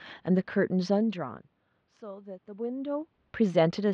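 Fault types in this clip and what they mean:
No system faults can be heard: the background noise belongs to the room, and the level changes around 1 s and again near 2.5 s come from the talker moving relative to the microphone, not from the recording chain.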